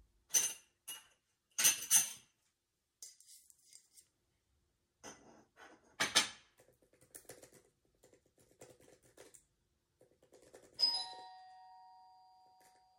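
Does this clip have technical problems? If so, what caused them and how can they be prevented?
No, there are no technical problems to hear in this recording of sounds. With no fault present, there is no cause to trace and nothing that needs preventing.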